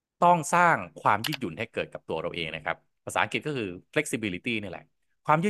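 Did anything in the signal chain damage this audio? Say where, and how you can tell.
No, nothing in the chain audibly damaged this speech recording at any stage.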